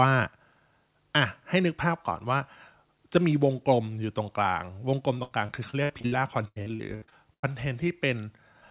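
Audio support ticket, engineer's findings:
Repeated packet loss (robotic sound), 5.18 to 7.45 s: choppy sound, 15 dropouts, longest 96 ms, roughly a third of the span patched. Jitter buffer concealment stretching the last frame. Spectrogram: smeared, repeated harmonic blocks; waveform: cloned periods between gaps.

Call path: hard band edge at 4 kHz, nothing above, which points to narrowband G.711 mu-law at 64 kbps. Flat black spectrogram region above 4 kHz throughout.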